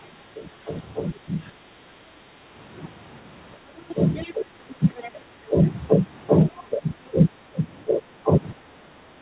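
From 0.02 to 2.1 s the speech is suppressed in double talk: the level drops by as much as about 15 dB over roughly a second in total, likely because the echo canceller could not separate the talker from the far end and turned both down. On a waveform this shows as abrupt notches in the envelope. On a spectrogram, energy fades in patches below the 4 kHz ceiling of the narrowband call path.

Between 3.89 and 5.49 s the other side's voice leaks through, about 20 dB below the speech. It is likely residual loudspeaker echo that the canceller left in the microphone signal, and it sounds like a faint second talker. On a spectrogram it appears as weak harmonic traces beneath the main ones.

Overlapping this, from 3.94 to 5.57 s, double-talk suppression returns more gently, cutting up to about 10 dB over about half a second. The waveform shows shallower dips.

At 6.56 to 6.63 s comes a brief scrap of leaked far-end voice, about 25 dB down. 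It is likely the same echo residue, a faint blip of a few tens of milliseconds on the spectrogram.

From 6.69 to 8.82 s the speech is suppressed in double talk again, dropping up to about 15 dB for roughly half a second in total. This is likely the canceller clamping down as both sides overlap, and it shows as dips in the envelope.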